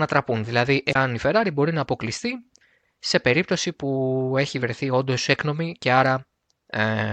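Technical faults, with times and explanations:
0.90–0.96 s, damaged data in the compressed stream: a short glitch of about 54 ms breaks into the speech. Corrupted bytes in the encoded frames there are misread by the decoder, which loses frame sync and emits garbled output until it finds the next valid header.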